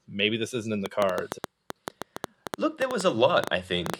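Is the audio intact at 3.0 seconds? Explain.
No. At 3.0 s the sound sits inside a train of clicks running from 0.86 to 3.95 s, starting after "maybe this isn't in". Around twenty similar pops arrive at an uneven pace of about 6.5 per second, some 15 dB above the speech, most likely from interference or a faulty connection. Their repeated, matching shape sets them apart from a lone click.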